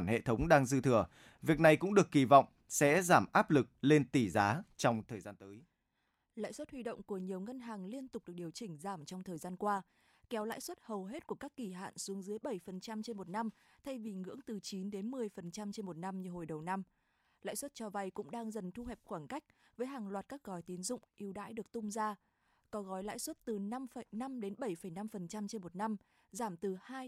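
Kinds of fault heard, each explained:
Zipper noise: right after "lực lên tỷ giá", from 4.90 to 5.41 s, the speech drops by roughly 15 dB in 1 dB steps, about thirty a second, each leaving a small click, so a ticking zip rides the fade.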